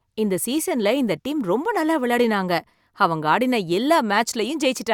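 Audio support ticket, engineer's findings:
No technical faults found in the speech signal; level, timing and continuity show nothing requiring action.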